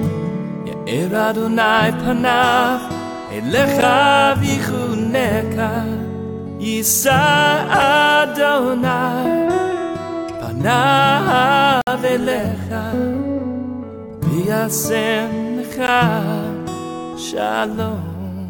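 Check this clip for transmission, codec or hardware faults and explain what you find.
Four brief hard-edged dropouts to silence, at 3.81 s, 7.82 s, 11.81 to 11.87 s and 15.87 s, lasting about 12, 4, 58 and 15 ms. They mark gaps between stream segments: segment timestamps leave small holes every 4 s, which the player fills with silence, losing no audio.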